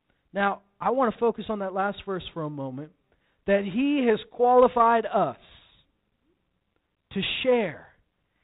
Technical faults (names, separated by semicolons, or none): none